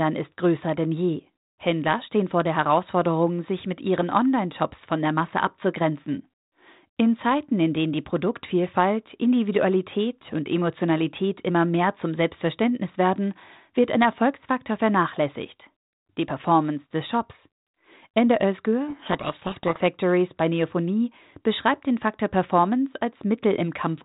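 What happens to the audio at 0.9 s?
Nothing goes wrong at 0.9 s; the speech passes through intact there, carried by G.726 ADPCM at 32 kbit/s with its usual band limit below 4 kHz and only light coding noise.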